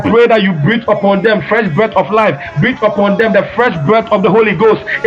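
Gain pumping runs through the whole recording, most likely because the input gain was set far too high and a fast limiter or compressor kept hauling it back down on every loud sound. The level swings by around 10 dB as the gain clamps down under each loud passage and recovers between them. Loud and soft parts sit closer together than they should, and the audio sounds squashed.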